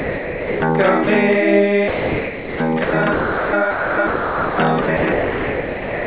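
From 0 to 0.62 s the opening sound is missing and steady, featureless noise or near silence plays in its place. There is a second, 30 ms gap at 1.04 s. Both are sound dropped by the voice detector. The sender's detector likely judged the material to be background and stopped transmitting, so the receiver filled in comfort noise. On a spectrogram these stretches show flat, even noise with none of the structure on either side. In the waveform they appear as a low, uniform band.

From 1.88 s through to the end, the sound is chopped by the voice detector. Transmission keeps cutting in and out, and about 3.05 s in total is replaced by comfort noise. The likely cause is the detector repeatedly switching off on quieter parts of the sound. The result is choppy. A spectrogram shows alternating blocks of detailed content and smooth noise, all capped at 4 kHz as expected from a narrowband G.711 call path. 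The waveform has abrupt level steps at each switch.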